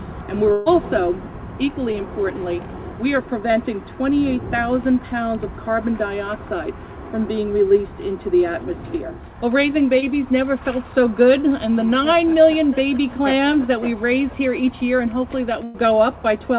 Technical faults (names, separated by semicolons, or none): burst of packet loss; short concealed packet loss